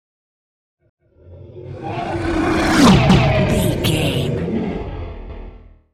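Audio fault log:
0.90 s, 3.10 s and 5.30 s: overlapping chunks. A stutter where about 200 ms of sound plays twice, recurring every 2.2 s. Processing ran in 2-second chunks, each starting before the previous one had finished, so each join repeats the overlap.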